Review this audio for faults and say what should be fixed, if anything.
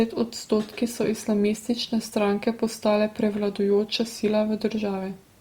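A block of digital silence at 3.99 s: about 5.3 ms of speech drops to zero with hard edges, giving a tick, which fits a 256-sample buffer going unfilled. To prevent it, give the audio thread enough headroom or a larger buffer so every block is delivered on time.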